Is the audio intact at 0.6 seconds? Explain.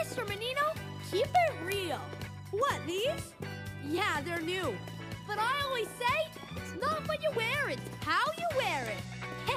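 No. Word clock ticks run from 0.15 to 9.47 s: an unlocked receiving clock drifts against the sender, slipping one sample roughly every tenth of a second, producing regular sharp ticks.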